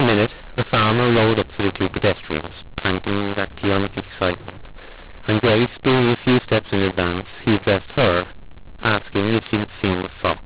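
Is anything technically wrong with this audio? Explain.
Yes, there's a mu-law and A-law mix-up running through the whole clip. The speech was coded as mu-law but decoded as A-law, so the two companding curves don't match. Levels get scrambled, with some too loud and some too quiet, and the quietest samples jump well above silence. The result is harsh, gritty, distorted speech, with noise filling the pauses. Under that, the band tops out around 4 kHz, which fits ordinary 8 kHz telephone coding.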